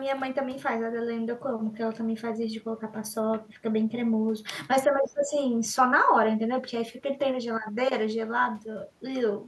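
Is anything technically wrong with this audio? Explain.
Yes. Between 4.87 and 5.38 s the speech sinks, falling by roughly 15 dB and losing clarity for about half a second before recovering, a sign of speech suppressed in double talk. The likely cause is an echo canceller confronted with both ends talking at once: unable to tell the near talker apart from the loudspeaker's echo, it clamps down on everything it hears, pulling the wanted speech down along with the echo.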